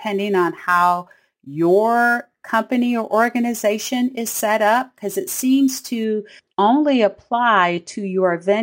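From 0.0 to 6.04 s, imaging from sample-and-hold upsampling adds a metallic fizz. Mirrored speech images sit between about 11 kHz and 22 kHz, roughly 21 dB down.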